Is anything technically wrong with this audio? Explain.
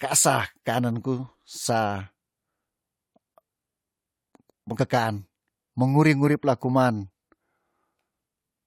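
No, nothing technically wrong turns up anywhere in this speech recording.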